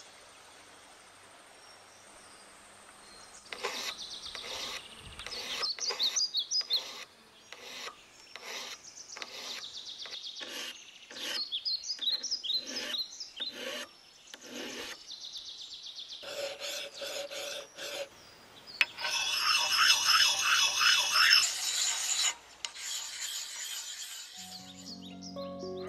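No technical faults are audible.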